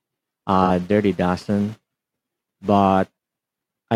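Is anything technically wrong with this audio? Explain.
Yes. There is AAC frame loss with concealment from 0.65 to 0.69 s, lasting about 43 ms, which fits a single lost frame. The decoder patched the gap from the last good spectrum. The speech briefly turns into a smeared, noisy, phasey patch.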